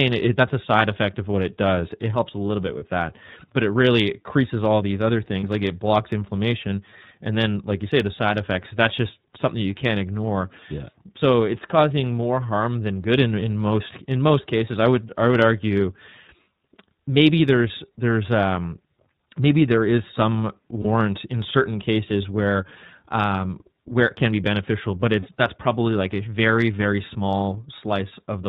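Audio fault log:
throughout, iLBC codec: the speech sits in a narrowband channel with nothing above 4 kHz, audibly rough and synthetic in a way that fits iLBC at 13.33 kbps with 30 ms frames. A spectrogram shows a hard, empty ceiling at 4 kHz.
2.78–2.85 s, 5.40–5.44 s, 20.82–20.85 s, 25.20–25.27 s, lost iLBC frames: the first three are 30 ms gaps and the last is 60 ms. The decoder repeats the last pitch cycle with added noise, giving a brief buzzy, held vowel. The waveform shows a repeated periodic stretch, and the spectrogram shows smeared, static harmonics. Speech recovers immediately afterwards.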